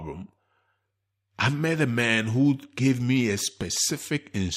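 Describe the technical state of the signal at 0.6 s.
At 0.6 s the speech signal is intact, with no audible technical fault at that moment.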